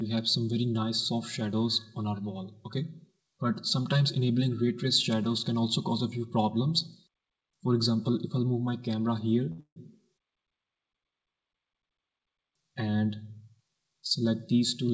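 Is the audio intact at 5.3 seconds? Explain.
No. At 5.3 seconds, as throughout the clip, the sound is hollow and phasey. This is channel delay comb filtering: one channel arrives about 5 ms late, and summing to mono cancels evenly spaced frequencies, starting around 100 Hz.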